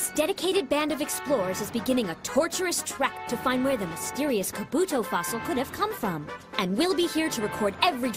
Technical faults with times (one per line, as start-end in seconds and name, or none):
none